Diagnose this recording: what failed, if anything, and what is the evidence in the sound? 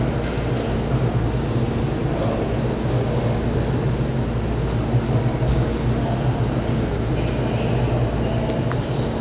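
Nothing stood out on listening to this recording of everyday sounds that would point to a failure at any stage of the chain.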